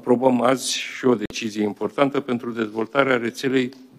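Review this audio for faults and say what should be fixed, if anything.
A corrupt frame muted gap runs from 1.26 to 1.33 s, an abrupt 76 ms hole consistent with roughly three frame lengths. Bit errors made the decoder reject those frames, and the player substituted silence while keeping timing intact. To prevent it, add error detection with retransmission or packet-loss concealment on the transport.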